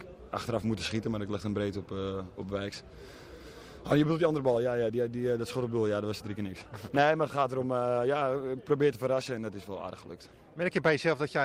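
No technical faults can be heard anywhere in this recording.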